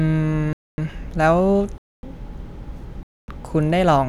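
Hard-edged 250 ms silences at 0.53, 1.78 and 3.03 s mark a gap between chunks: unlike dropouts, the speech resumes intact after each pause, with chunks of about 1 s.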